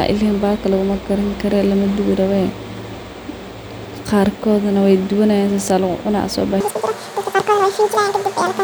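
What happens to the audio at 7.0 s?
At 7.0 s the speech is inside a section at the wrong speed, running from 6.60 s to 8.64 s. It plays at 2.0 times its recorded rate, likely from being fitted to the wrong clock, so it sounds hurried and around ten semitones higher. Unlike a pure pitch shift, tempo and pitch jump together at 6.60 s.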